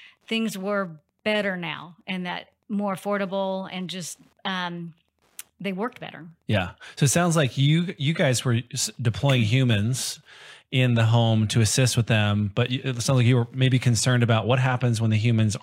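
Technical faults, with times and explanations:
Throughout, Wi-Fi interference. A faint, steady ticking runs beneath the speech at about ten ticks a second, far below its level. A nearby Wi-Fi radio sends a beacon every 102.4 ms. The audio circuit rectifies each burst into a small click.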